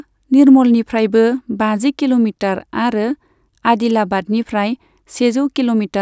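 No technical faults can be heard anywhere in the speech recording, and the signal holds steady throughout.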